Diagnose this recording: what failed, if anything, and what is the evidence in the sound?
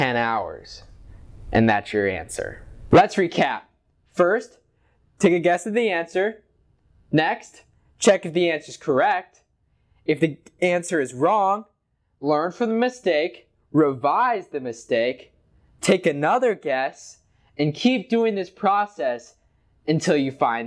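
Nothing stood out on listening that would point to a failure at any stage of the chain.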